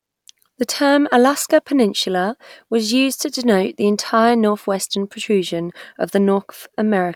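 No technical faults can be heard anywhere in the recording; the speech signal stays continuous and stable throughout.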